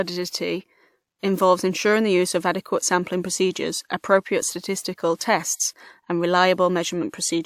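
Pre-echo at 5.16 and 5.56 s: codec noise spread across each block hisses for 47 and 38 ms before sharp speech onsets, smearing the attacks.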